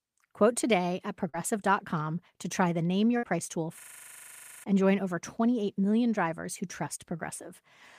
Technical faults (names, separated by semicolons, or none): short concealed packet loss; burst of packet loss; system hang loop